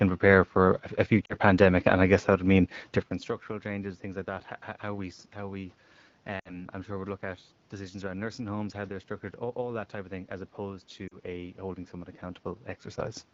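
Lost AMR speech frames occur at 1.25–1.34 s after "prepare for a", 6.39–6.65 s before "I'm sure we look", and 11.07–11.18 s between "of thing as opposed" and "a holding someone". Each time, the decoder stretches the last good sound with falling gain, so the voice drops to near silence within two frames and comes back weak or rough for a moment. On a spectrogram, the harmonics smear flat and fade, and the waveform envelope sags.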